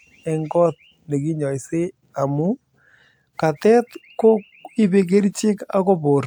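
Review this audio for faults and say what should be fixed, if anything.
Nothing to fix: no technical faults are audible in this speech recording.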